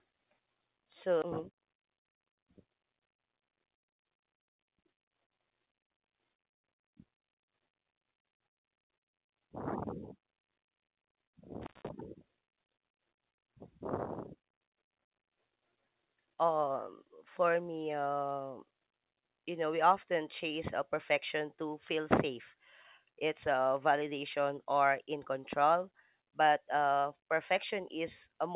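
At 1.22 s the speech jumps forward. This is a skip ahead. A stretch of audio, roughly seven tenths of a second, never reached playback. Either it was lost in transit or the jitter buffer overflowed and discarded it while later audio was already queued. Nothing fills the hole. The two sides are butted together with no audible gap, so the speech lurches abruptly into later material.

From 1.39 s to 4.11 s comes a jitter buffer speed-up. After the jump, the buffer was holding more audio than its target. To shed that excess delay, the receiver trimmed many short slices, each a pitch period or a few long. Roughly a fifth of a second disappears this way. The speech plays at 108 percent of normal speed, yet its pitch stays put. It sounds hurried and slightly clipped in rhythm.

At 11.62 s an intermittent contact breaks the line until 11.89 s. A loose plug or cable opens for about 182 ms. The sound drops out, with crackle marking both the break and the reconnection. 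Between them only faint hiss remains. The band-limited character of the call path, with nothing above 4 kHz, fits G.711 mu-law at 64 kbps. That narrow top end frames every part of this clip.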